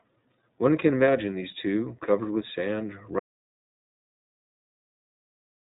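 From the start, the speech carries iLBC codec damage, and it is plainly audible. Nothing passes above 3.8 kHz, so the sound is narrow and dull. Each short frame is coded on its own. Voicing turns rough and slightly synthetic, which fits the 15.2 kbps, 20 ms mode.

At 3.2 s the audio drops out to dead silence and stays silent to the end. No room tone remains. The likely cause is a lost input, from a disconnected device, failed link or mute, while recording continued.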